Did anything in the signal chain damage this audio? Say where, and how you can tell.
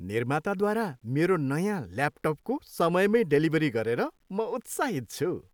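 Yes. Throughout the speech there's a grainy edge that rides along with the level, so quiet tails get gritty. That points to low bit depth without dither, likely a sample-format conversion rounding down to about 10 bits, leaving signal-tracking error roughly 50 dB under the speech.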